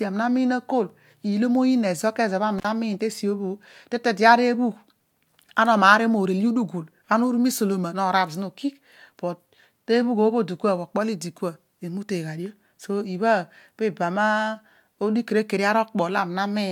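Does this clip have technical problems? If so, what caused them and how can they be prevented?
Yes: at 2.58 to 2.65 s the speech cuts out with a crackle, an intermittent contact opening for about 46 ms. Reseat and secure cables and plugs before recording.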